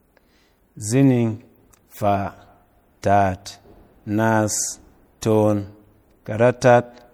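From start to end, the speech carries the artefacts of heavy lossy coding. This is likely low-bitrate audio saved at a high bitrate. An MP3 encoded at a low rate, which fits around 64 kbit/s, seems to have been re-encoded at a much higher one. The second pass cannot restore what the first discarded. Nothing is present above 20.9 kHz.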